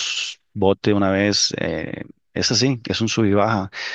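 A short speech recording with no technical faults to report. Nothing in the signal calls for a timed note or a cause.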